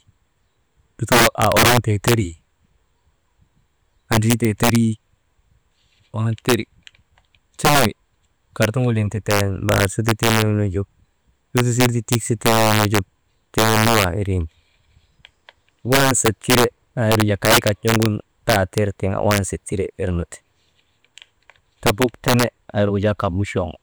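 Integer overflow runs through the whole recording: the speech was driven about 6 dB past the largest value the integer format can hold, and instead of being limited there, each over-range sample wrapped round to the opposite extreme. Only around one percent of samples cross that line, but every one of them jumps across the full range, so the loudest syllables carry violent, sharp cracks, far harsher than ordinary clipping.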